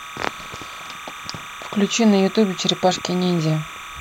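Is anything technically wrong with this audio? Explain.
Yes, there is timecode bleed running through the whole speech clip. Linear timecode from a neighbouring track or cable has leaked into the recording. That code is a square wave that flips between two pitches, here around 1 kHz and 2 kHz, and its pattern repeats 30 times a second, which fits 30-frame code. It sits roughly 15 dB below the speech and comes through as a steady, chirping warble underneath the talking from start to finish.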